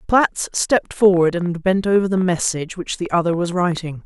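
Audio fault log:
1.01–3.78 s, train of clicks: likely interference or a faulty connection injecting brief pulses into the signal, about 6.9 per second at uneven spacing. Around twenty near-identical clicks, roughly as loud as the speech, pop over it and through its pauses.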